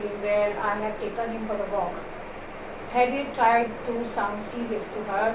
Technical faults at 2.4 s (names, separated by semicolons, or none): none